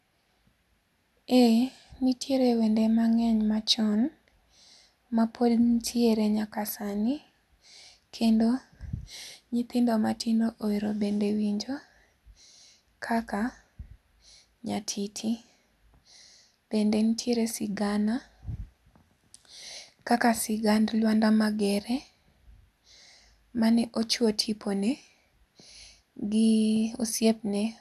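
Nothing stood out on listening to the speech in this recording.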